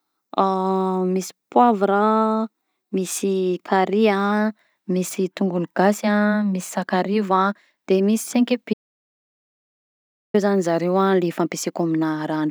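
An audio dropout to silence runs from 8.74 s to 10.34 s, removing about 1.6 s of the speech. The sound cuts off abruptly mid-flow and the gap is dead silence, with no room tone or background at all, until speech resumes at "zany zareo". The input signal was likely lost for that stretch, through a disconnected source, a broken link or an accidental mute, while recording continued writing silence, so whatever was said there is gone.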